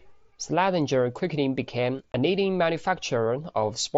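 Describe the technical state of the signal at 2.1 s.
Right after "quickly became", from 2.12 to 2.14 s, there's unconcealed Bluetooth headset packet loss. A 20 ms hole, which fits about three dropped mSBC frames between headset and phone, got filled with silence or an idle pattern instead of being patched over, so the speech cuts out with hard, abrupt edges.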